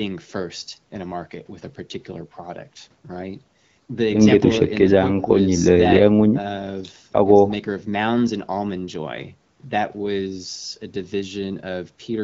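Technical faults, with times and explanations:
No technical faults are present: the speech passes through the AMR wideband (HD Voice) codec with only light coding texture, which fits its 12.65 kbit/s mode.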